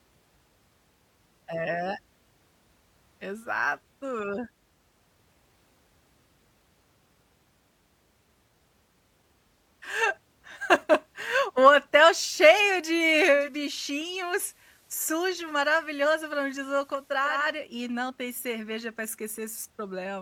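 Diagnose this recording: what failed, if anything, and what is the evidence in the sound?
The failure is in radio reception: digital radio blending to analogue. At 13.28 s the receiver loses the digital stream and cross-fades over about 0.37 s to the station's FM broadcast, then returns at 17.55 s. While it's on FM, hiss sits roughly 35 dB under the speech, and the level drops about 2 dB. That's the FM path's own noise and level, not anything in the recording chain.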